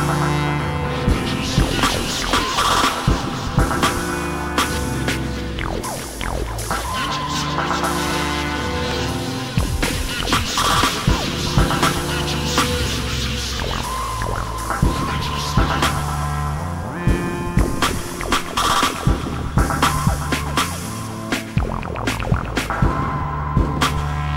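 Loud pops occur at 1.79–1.99 s, as two quick pops, and at 8.91–8.93 s, each peaking around 15 dB above the audio, which continues underneath. A sudden voltage step, likely from a plug, switch, static or driver glitch, gets shaped into sharp thumps.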